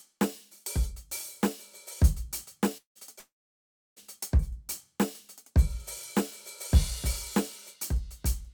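At 2.77 s the music smears into a fading buzz and goes silent for about 0.1 s before resuming at 2.98 s. At 3.19 s it happens again, with silence lasting about 0.67 s until 3.99 s. This is likely a long network dropout: roughly 180 ms and then 780 ms of audio never arrived, the receiver stretched the last sound until it died away, and playback picked up later without the lost material.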